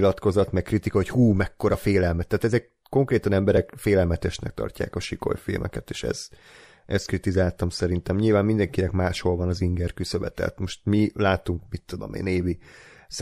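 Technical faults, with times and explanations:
3.57 s, dropped buffer (overrun): just before "félelmetesnek tartják a sikoly" the speech jumps forward, with no gap of silence between the two sides of the join. Only a few milliseconds of sound seem to be missing, so no syllable is lost. A skip with no silence likely comes from samples overwritten before they were read, which sets it apart from a dropout, where the lost stretch is heard as a brief hole.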